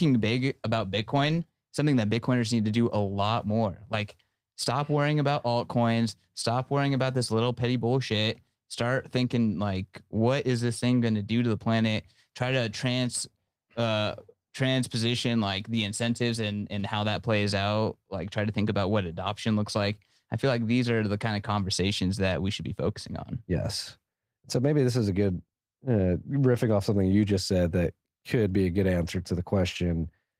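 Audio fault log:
No faults are heard in this speech recording.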